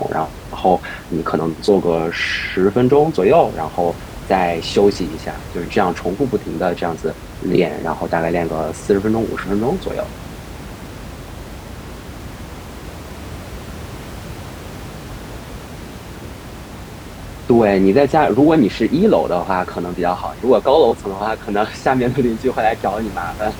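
No technical faults can be heard in this speech clip. The background noise of the room sits steadily underneath, about 16 dB below the speech.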